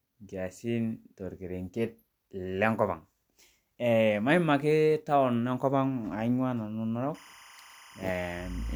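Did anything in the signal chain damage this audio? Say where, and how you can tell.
Yes. Timecode bleed from 7.15 s to the end: 25 fps linear timecode leaks in through the analogue wiring as a faint warble flipping between about 1 and 2 kHz.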